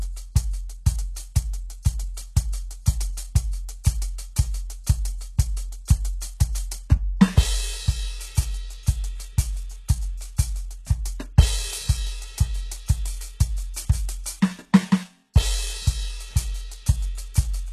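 From start to finish the music has plainly audible HE-AAC compression damage, likely from a very low bitrate around 16 kbps. The treble above the crossover is rebuilt from copied lower bands, so the treble sounds gritty and metallic, and nothing reaches above 12.3 kHz.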